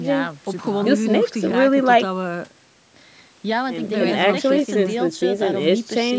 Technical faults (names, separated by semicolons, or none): none